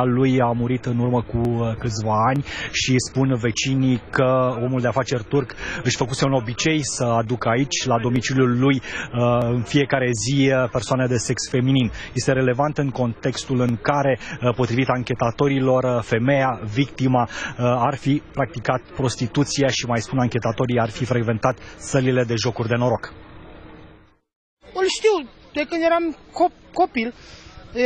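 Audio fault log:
1.45, 2.36, 6.89, 8.16, 9.42, 11.26, 13.69 and 21.52 s, dropped samples: each moment is a single sharp click with a thin vertical line across the spectrum. The likely cause is that less than a millisecond of samples went missing each time, so the waveform leaps straight from one value to a later one. That gap is far too brief to remove any audible sound, so only the step itself is heard, as a click.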